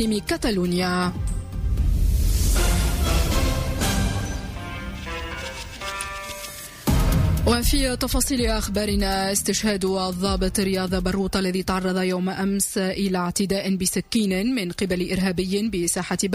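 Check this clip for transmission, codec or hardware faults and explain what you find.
Nothing here sounds wrong; the audio runs along steadily with nothing in the transmission or the hardware calling attention to itself.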